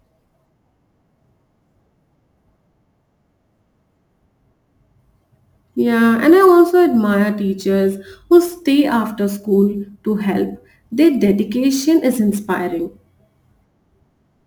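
From start to finish the speech carries the signature of crude rate conversion. The sound points to an upsampling from 32 kHz to 44.1 kHz done by simply repeating the nearest sample, with no interpolation filter. Because the two rates share no simple ratio, the repeat pattern cycles irregularly, leaving an error roughly 30 dB below the signal. It is heard as a gritty, inharmonic fizz riding on louder and brighter syllables.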